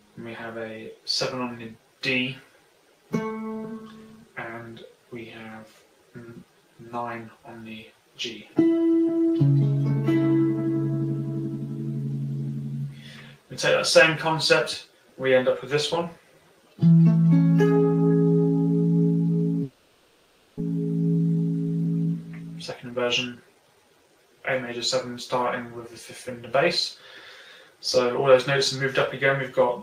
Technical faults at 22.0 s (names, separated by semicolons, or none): jitter buffer speed-up